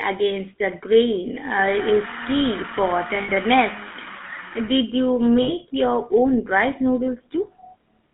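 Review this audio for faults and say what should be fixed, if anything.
The whole clip carries GSM full-rate codec damage: a buzzy, gravelly roughness from a speech codec that models the vocal tract and rebuilds the excitation from sparse, regularly spaced pulses, here consistent with the 13 kbps full-rate mode. The line is band-limited to about 200 Hz to 3.5 kHz. On a spectrogram, energy stops sharply near 3.5 kHz with nothing above, and harmonics look smeared and grainy. To prevent it, record or route the speech over a wideband path instead of a GSM full-rate link.

Lost GSM frames occur at 3.22–3.29 s, right after "uh is key for", and at 5.42–5.52 s, just before "your own rice". Each gap is about 60 ms, which fits three missing 20 ms frames. The decoder bridges the gaps by repeating the last good frame's parameters, so you hear a brief metallic, ringing hold instead of the speech. On a spectrogram, each gap shows frozen, horizontally stretched bands. 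To prevent it, transmit over a link with enough signal quality or error protection to keep frames intact.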